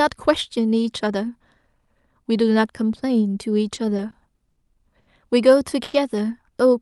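Repeated stalls (stutter) run from 3.75 to 4.58 s. The jitter buffer ran dry five times as packets kept arriving late, and each time the receiver stretched the last sound to fill the hole. About 120 ms was added, the longest gap about 50 ms, roughly 14% of that stretch. The speech drags and hiccups, but nothing is lost.

A short stall from a late packet follows at 4.99 to 5.10 s. One packet arrived about 80 ms late, so the buffer emptied and the receiver held the previous sound for 80 ms before resuming at the same point. A syllable lingers with a faint buzzy dip.

A call audio freeze sits at 5.83 to 5.96 s. For 100 ms the sound hangs as a fading, buzz-like continuation without dropping to silence, then picks up exactly where it stopped. This is likely packets held up in transit for about 100 ms, leaving the jitter buffer empty.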